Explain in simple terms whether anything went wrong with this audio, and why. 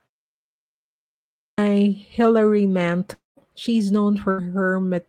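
Three things went wrong.

At 0.94 s, after almost a second of silence, the sound starts abruptly. About 0.64 s of it is gone, up to 1.58 s. This is a clipped start after a pause. The playback device had gone idle and was still waking up.

From 3.13 to 3.39 s the sound is stretched into a fading buzz or hiss, then goes quiet for about 0.17 s. It resumes with roughly a quarter second lost. This is likely a long network dropout, where the audio stopped arriving for a while.

From 4.31 to 4.40 s the sound is held on as a short buzz or hiss that fades away. Then the sound picks up slightly further on, with about 80 ms missing. This is a burst of packet loss. A few pieces of audio never arrived, and the gap was papered over.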